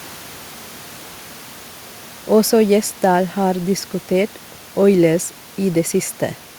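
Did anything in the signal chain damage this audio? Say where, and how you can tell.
No, nothing in this speech stood out as damage from the signal chain; the only thing beneath it is background noise from the room, about 22 dB below the speech, which belongs to the recording itself.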